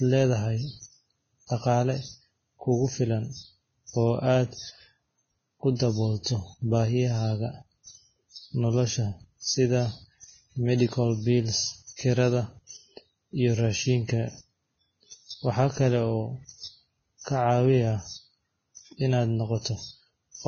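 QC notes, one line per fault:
Throughout: Vorbis compression. The speech was likely encoded with Vorbis at a very low setting, and the heavy damage points to a bitrate around 16 kbps. The encoder discarded everything above 6.5 kHz and quantised the remaining upper band so coarsely that its fine structure was replaced by noise of similar energy. The result is a dull top end with a hissy, grainy sheen over the treble, roughened voiced tones and softened consonant attacks.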